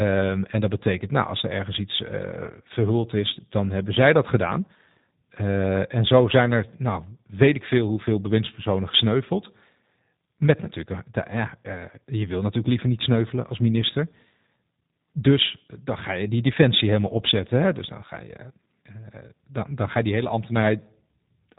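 From start to finish the speech carries G.729 codec damage, and it is plainly audible. The encoder rebuilds each 10 ms frame from a vocal tract filter, a pitch predictor and a few coded pulses, so voices come out slightly rough and synthetic. The density of the coding fits a rate around 8 kbit/s. On a spectrogram everything stops sharply near 3.8 kHz, and harmonics look smeared and grainy rather than cleanly striated.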